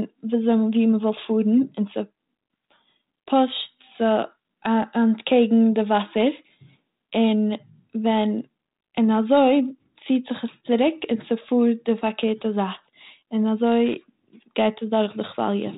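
No faults can be heard in this speech clip.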